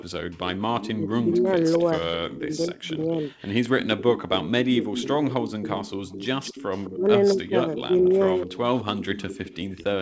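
Speech over a wideband call path, with nothing above 8 kHz. An echo leak is audible as a faint delayed copy of the speech, trailing by 215 ms: briefly from 0.0 to 0.04 s at roughly 20 dB down, then continuously from 0.79 s to the end at roughly 15 dB down. This is likely a far-end loudspeaker echo that the canceller failed to remove. Speech suppressed in double talk shows as the talker dipping or breaking up in pieces at 0.97–1.48 s, 2.39–3.1 s, 3.89–6.04 s and 6.96–7.78 s, with drops of roughly 10 to 20 dB, deepest in the 3.89–6.04 s stretch. The likely cause is the echo canceller attenuating the near talker while the far side's sound plays on the loudspeaker.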